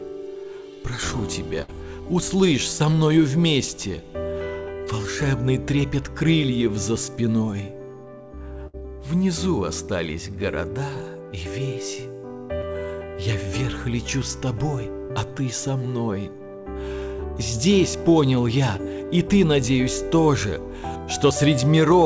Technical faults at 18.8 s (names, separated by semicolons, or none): short concealed packet loss